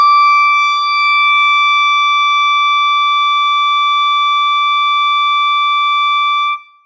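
The music shows no technical faults; it has passed through a call's microphone processing, which trims the lowest bass and leaves nothing above 8 kHz, as that path normally does.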